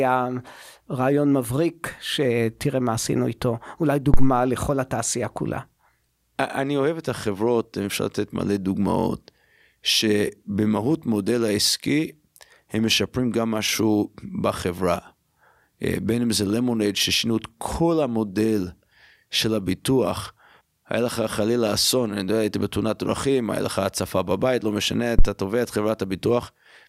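At 4.14 to 4.35 s and again at 25.19 to 25.24 s, a phantom power thump peaks at about -4 dBFS. A supply step on the live input surges through the coupling capacitors, giving a deep thud that dies away within 47 ms, then 12 ms. Unlike a plosive pop, it doesn't follow the speech.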